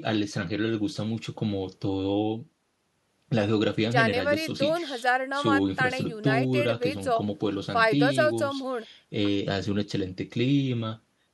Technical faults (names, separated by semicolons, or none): none